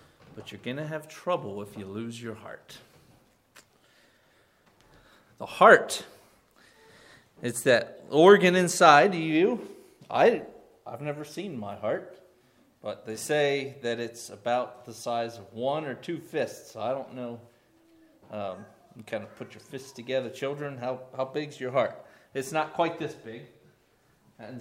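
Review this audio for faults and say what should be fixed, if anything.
Nothing stood out on listening, so there is nothing here that needs fixing.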